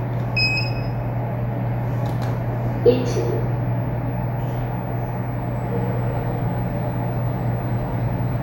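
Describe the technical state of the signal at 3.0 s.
At 3.0 s the audio is intact, with no dropout, clipping, glitch or other fault at that point.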